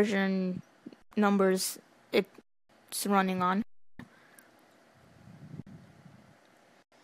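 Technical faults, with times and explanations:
1.02, 2.42, 3.62, 5.62 and 6.83 s: underrun with held sample. The sound freezes flat for 93, 279, 372, 46 and 93 ms, then carries on where it stopped, with only a soft join. The output buffer ran empty and the converter held its last value until data returned.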